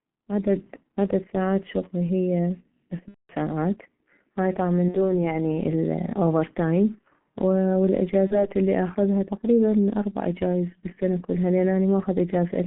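From the start the speech runs through a G.723.1 codec at around 6.3 kbit/s, squeezed into a 150 Hz to 3.4 kHz phone band. Heavy coding damage leaves it muffled and hoarse, with consonants smeared because the voice model lags behind quick changes.

Then there's VoIP packet loss concealed by the speech codec, at 3.08 to 3.33 s, 4.88 to 4.98 s and 8.27 to 8.47 s. The decoder fills gaps by stretching its last pitch and filter and fading them, giving a buzzy tone or coloured noise that fades. The first gap fits roughly 210 ms of lost audio, and each one takes a moment to recover after the audio comes back.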